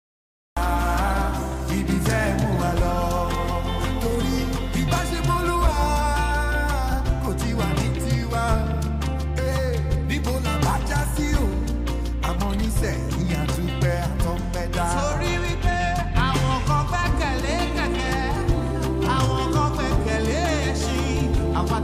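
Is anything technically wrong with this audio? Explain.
Yes, there's a cut-off start. The first 0.57 s is digital silence, then the sound jumps in already mid-way at about 0.57 s, with no natural attack or fade-in. Capture began late, so the opening of that sound simply never got recorded.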